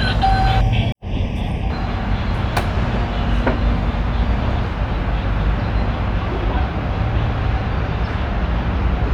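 Channel delay (comb filtering) appears from 0.61 s to 1.70 s. One channel arrives a fraction of a millisecond behind the other, and when the two are summed to mono the content they share cancels at evenly spaced frequencies, the first notch falling around 1.5 kHz and the rest stepping upward from there. For just over a second the sound turns hollow and phasey, with fixed notches.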